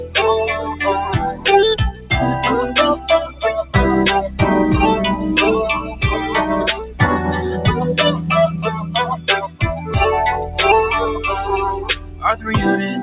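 A noise suppressor designed for speech runs across the whole clip, treating steady tones, ambience and decay as noise. Level swings by around 10 dB as held material sinks and attacks pass, giving a pumping, fluttering envelope with jagged gain steps on the waveform.

The suppressor cuts sound hardest at 0.58 to 0.74 s (about 5 dB), 1.91 to 2.1 s (about 12 dB), 5.81 to 6.02 s (about 11 dB), 6.75 to 7.0 s (about 11 dB), 9.48 to 9.93 s (about 13 dB) and 11.78 to 12.48 s (about 13 dB). Sustained parts and tails collapse. On a spectrogram, energy fades across the band, and the waveform envelope pinches abruptly.

Through the call path, the spectrogram shows nothing above 4 kHz, which fits a G.711 A-law link at 64 kbps.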